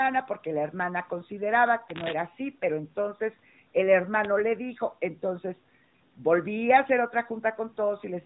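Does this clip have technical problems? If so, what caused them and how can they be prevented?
Yes, there's a short case of lost AMR speech frames at about 1.84 to 1.93 s. About 40 ms of the speech failed to arrive intact, which fits two 20 ms frames. The decoder filled the gap by repeating the last good pitch and vocal tract settings at falling gain, so you get a brief smeared dip before the speech picks up again. The narrowband codec itself does only light damage around it. A stronger radio link, or error correction and retransmission further up the chain, would prevent it.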